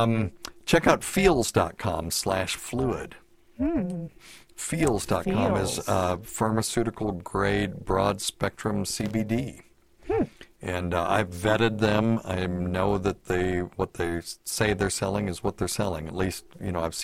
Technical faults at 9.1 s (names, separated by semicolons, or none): overlap-add ripple; loose connector crackle